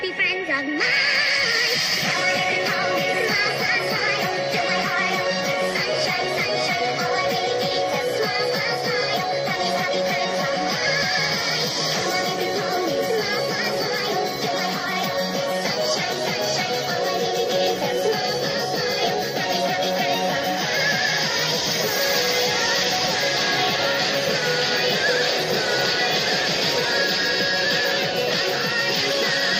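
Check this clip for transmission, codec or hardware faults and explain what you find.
Nothing here points to a transmission, codec or hardware problem, so there's nothing to flag in this one.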